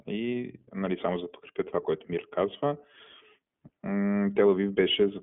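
Throughout the clip, the speech passes through the iLBC codec. The band is held to roughly 150 Hz to 3.4 kHz, so it sounds thin and muffled. Each frame is coded independently, leaving a plainly audible rough, synthetic edge, consistent with iLBC's 15.2 kbps, 20 ms mode.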